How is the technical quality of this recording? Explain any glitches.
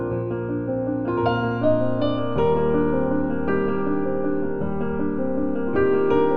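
Nothing stood out on listening; no glitches were heard anywhere in the recording.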